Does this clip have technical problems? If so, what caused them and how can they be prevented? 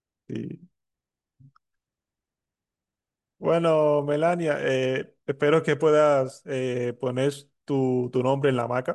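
No, there's nothing technically wrong to hear in this speech clip, so there's no cause to track down and nothing you need to do differently.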